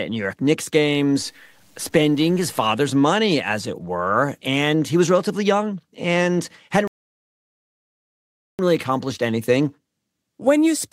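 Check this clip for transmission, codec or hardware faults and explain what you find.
Two faults stand out. From 1.21 to 2.71 s there is low bit depth without dither: the samples were likely truncated to very few bits, around 9, leaving grainy distortion roughly 40 dB below the speech. From 6.88 to 8.59 s a rebuffering stall occurs: playback ran out of buffered data and paused, inserting 1.7 s of silence before the speech resumes exactly where it stopped.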